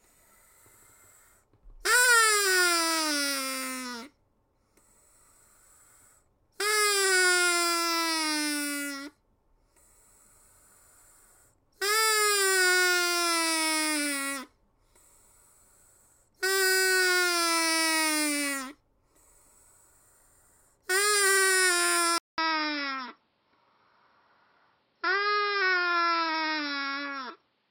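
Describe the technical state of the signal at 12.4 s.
Nothing at 12.4 s points to a technical fault; the signal there is intact.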